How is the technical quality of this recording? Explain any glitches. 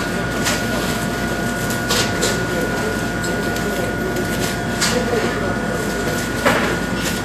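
The recording is marred by audible coding damage throughout. Vorbis compression, likely at a low bitrate around 36 kbps, cuts everything above 14.2 kHz and coarsely quantises the treble, so fine high detail turns into grainy hiss, tones sound rough, and attacks blur. A spectrogram shows a hard ceiling at 14.2 kHz and speckled, patchy energy just beneath it.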